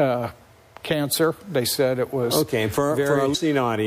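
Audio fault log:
3.31–3.35 s, damaged data in a compressed stream: Part of the encoded stream reached the decoder wrong, with bytes lost, zeroed or overwritten, so it misread the frames there and lost its lock on the frame boundaries, hunting for the next valid header before decoding normally again. For about 44 ms the output is garbage reconstructed from corrupt frame data, heard as a brief, harsh blip or squawk that breaks abruptly into the sound.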